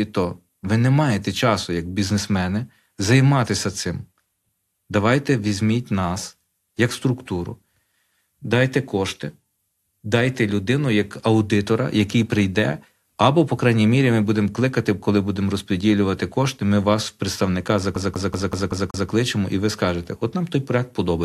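From 17.96 to 19.10 s the speech hits a CD stuck on one turn. The same 0.19 s loops six times, each jump marked by a brief mute.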